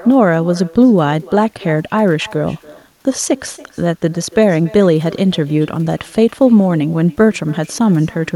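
From start to finish, the speech is trailed by echo with no canceller: the far end's loudspeaker feeds back into its microphone, and nothing strips it out. So every phrase returns roughly a third of a second later, about 24 dB down, and thin.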